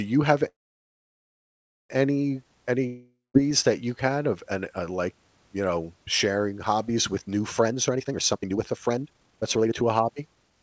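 It's a speech clip carried over a call link whose band stops at 8 kHz, which fits a wideband codec like G.722. From 0.48 to 1.91 s, right after "you have", the sound hangs for about 1.4 s, nearly all silence, then picks up with nothing lost, likely a call audio freeze where delayed packets drained the jitter buffer. At 2.87 to 3.36 s, after "you have any", it cuts out and resumes at "that you had of" with roughly half a second gone, likely a long network dropout. From 7.66 to 10.58 s, after "sharing hobbies with new", it's a jitter buffer speed-up, running at about 147% speed with unchanged pitch as around 1.5 s of pitch periods get trimmed, so it sounds rushed.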